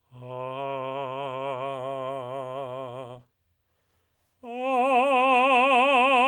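No technical faults can be heard in this music.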